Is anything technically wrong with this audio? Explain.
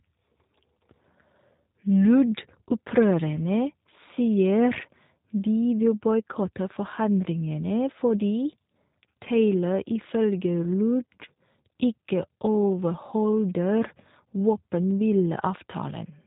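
Yes. Throughout the speech, G.729 codec damage is plainly audible. The codec resynthesises each 10 ms frame from a vocal-tract filter, a pitch predictor and a few pulses, which fits 8 kbit/s coding. Nothing passes above 3.8 kHz, and the speech sounds rough and synthetic.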